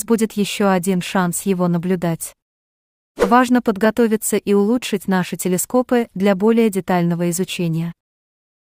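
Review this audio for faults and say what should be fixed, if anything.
Nothing needs fixing; no faults are audible anywhere here.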